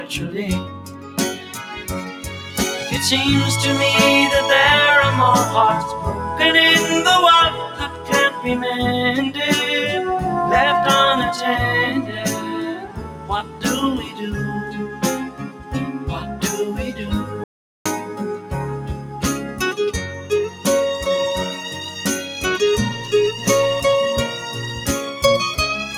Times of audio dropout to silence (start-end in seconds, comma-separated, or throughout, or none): 17.44-17.85